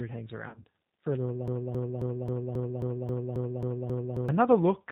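Throughout, the G.729 codec at 8 kbit/s strips everything above 4 kHz and leaves the speech plainly rough and synthetic-sounding. From 0.48 to 0.65 s, between "it hangs" and "for a little", VoIP packet loss concealed by the speech codec drops about 100 ms across 160 ms, consistent with several lost 20 ms packets. The decoder stretches the preceding sound into a buzzy tone or coloured noise that fades. After "for a little", from 1.48 to 4.29 s, a broken-record loop repeats a 269 ms fragment back to back about ten times. The likely cause is a stalled stream resending its last buffer, and the speech that should have played there is lost.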